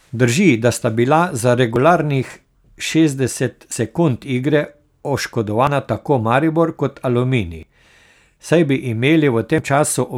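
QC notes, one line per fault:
1.76, 3.72, 5.67, 7.63, 9.58 s: audio missing between chunks. Each skip drops around 40 ms and butts the two sides together, the first right after "da sta bila za". The steady spacing points to a recorder likely losing a sliver at each 2 s chunk boundary.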